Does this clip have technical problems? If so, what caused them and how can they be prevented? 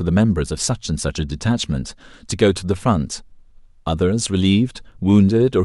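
No, nothing in this speech recording points to a technical fault, so there is no cause to trace and nothing to prevent.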